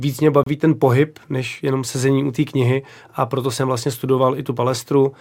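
At 0.43 s the timestamps of two consecutive stream segments fail to meet, leaving a gap between stream segments that the player fills with silence until 0.47 s. About 30 ms of nothing is inserted into the speech, so the sound stops abruptly and restarts just as abruptly, with hard edges on both sides of the hole. Nothing is overwritten. The audio resumes exactly where it left off, only slightly later.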